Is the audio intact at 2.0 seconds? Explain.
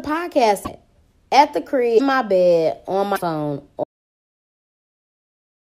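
No. From 1.97 to 2.00 s the speech is disrupted for about 30 ms, a little over one 26.1 ms MP3 frame, and the audio jumps ahead rather than continuing smoothly. The likely cause is a broken MP3 bit reservoir. Material appears to have been cut out, so the frame after the cut reaches back into the reservoir for data it stored earlier and picks up bytes belonging to a different frame. It decodes garbage for that stretch before recovering.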